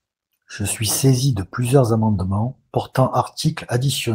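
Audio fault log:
No faults found in this speech clip.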